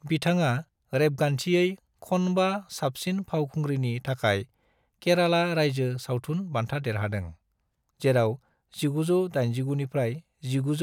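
Speech, with nothing technically wrong with it.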